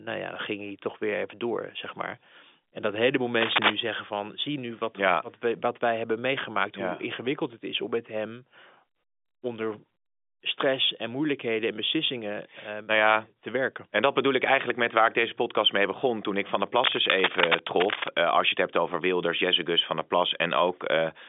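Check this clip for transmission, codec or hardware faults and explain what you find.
Cable scratch noise appears twice in this telephone-band speech, heard through clean G.711 coding that stops near 3.8 kHz. From 3.41 to 3.74 s and again from 16.78 to 18.21 s, dense uneven crackle sits roughly level with or above the speech, likely from a worn connector or cable flexing.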